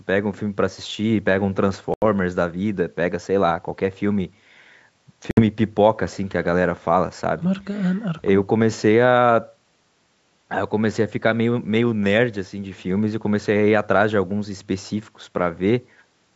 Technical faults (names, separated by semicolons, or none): Bluetooth stall